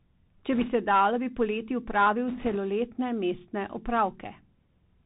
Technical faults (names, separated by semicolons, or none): Bluetooth CVSD headset codec; bit errors on a Bluetooth voice link